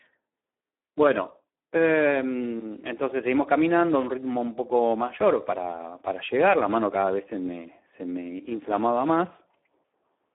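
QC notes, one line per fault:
Throughout, Speex codec: the speech sounds hoarse and grainy. It is squeezed into a telephone-like band of about 250 Hz to 3.5 kHz, with nothing above 3.8 kHz. Heavy damage at this level fits an 8 kbps setting, which leaves too few bits for the excitation.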